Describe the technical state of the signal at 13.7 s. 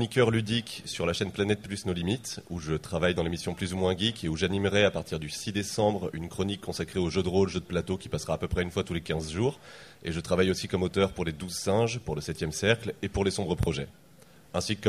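Right around there you get a Bluetooth stutter, from 13.63 to 13.67 s. A packet went missing, so the receiver replayed its last chunk of about 23 ms to fill the hole. It comes across as a quick hiccup, and then the sound picks up a little further along.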